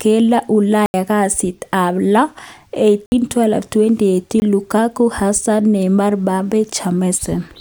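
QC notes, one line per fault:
0.86–4.42 s, block of digital silence: samples were zeroed, likely because the output buffer went unfilled, at 0.86–0.94 s (80 ms, just before "kasit ab lo"), 3.06–3.12 s (60 ms) and 4.40–4.42 s (20 ms). All three sound like short holes.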